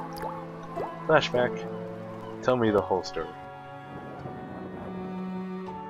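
A disc scratch defeating error correction once per revolution causes CD scratch ticks: eight brief clicks between 1.35 and 3.36 s, roughly four per second, the longest lasting about 3 milliseconds.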